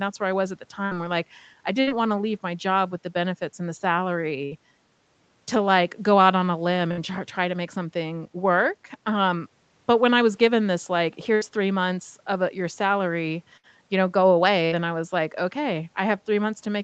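Seven bursts of packet loss interrupt the speech, at 0.85–0.94, 1.81–1.90, 4.45–4.54, 6.91–7.00, 11.35–11.44, 13.57–13.66 and 14.65–14.74 s. Each time, a short run of audio never arrived in time. The receiver stretched the last sound for about 60 ms and let it fade. You hear a brief held buzz or dying hiss. Then speech jumps ahead, about 60 ms of it gone. The band above 8 kHz is empty throughout, as the call path intends.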